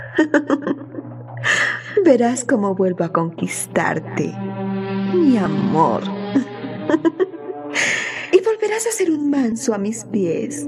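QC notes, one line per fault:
9.52 s, compressed frames skipped: the decoder lost what sounds like a single compressed frame, about 30 ms of audio, which fits a 32 ms frame length. Either the frame was missing from the file or the decoder rejected it as damaged. The sound jumps forward by that span instead of playing it.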